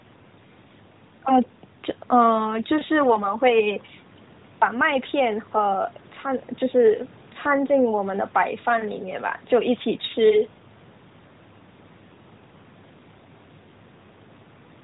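No faults found in this speech; the call's microphone processing and the AMR narrowband mobile codec path limit it to about 4 kHz with light coding texture, as expected for a mobile call.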